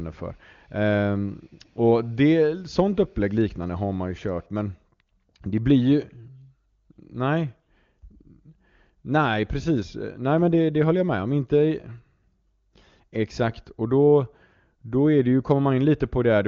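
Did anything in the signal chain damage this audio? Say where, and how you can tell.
No, nothing in the signal chain damaged this audio.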